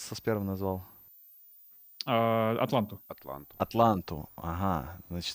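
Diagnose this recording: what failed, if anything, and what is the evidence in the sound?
A switching supply whistle is in the analogue power and wiring. A high tone near 15 kHz wanders between 13.9 and 15.4 kHz throughout, roughly 25 dB below the speech.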